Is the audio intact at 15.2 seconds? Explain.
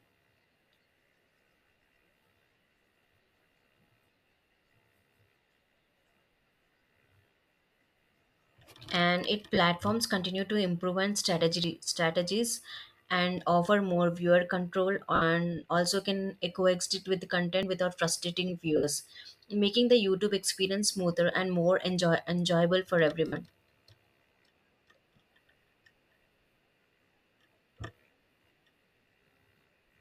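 No. Lost LE Audio frames create a gap from 15.15 to 15.22 s, just before "also can". About 60 ms of sound is missing, which fits several dropped 7.5 ms frames. The decoder fills the hole by repeating the last spectrum with random signs and fading it. The speech turns into a brief noisy smear.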